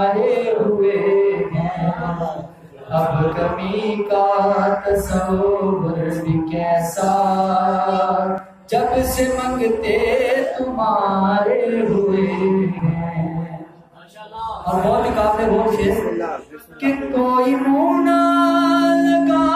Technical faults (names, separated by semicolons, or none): dropped buffer (overrun)